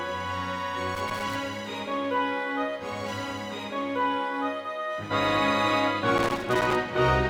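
Loose connector crackle appears twice, from 0.95 to 1.36 s and again from 6.18 to 6.76 s. Each burst comes from a contact somewhere in the chain that is worn or dirty and keeps making and breaking as it shifts. That chops the signal on and off irregularly, so the audio is overlaid with a ragged scratching crackle for about 0.4 s the first time and just under 0.6 s the second.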